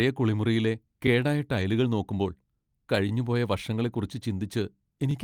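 A speech clip with two kinds of fault. From 1.59 to 1.61 s, a lost packet rebuilt from error correction leaves a brief rough, noisy patch. This fits one lost 20 ms packet replaced by its low-bitrate copy. Overlapping chunks cause stutters at 3.09 to 3.11 s and 5.11 to 5.13 s. Each join replays 20 ms of sound, and the joins come every 2.0 s.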